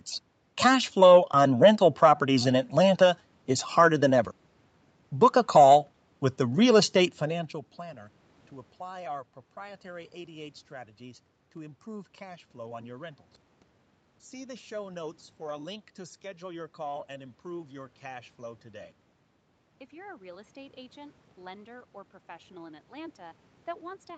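No technical faults can be heard anywhere in this recording.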